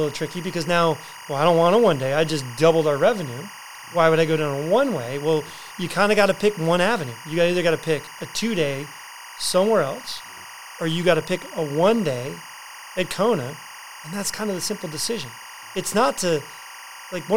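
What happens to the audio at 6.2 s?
At 6.2 s, timecode bleed sits behind the speech, as it does through the whole clip. Linear timecode from a neighbouring track or cable has leaked into the audio. The code is a square wave that flips between two pitches, around 1 and 2 kHz. Its pattern repeats at 24 frames per second. It sits well below the speech, roughly 20 dB down. It sounds like a steady, chirping warble running underneath.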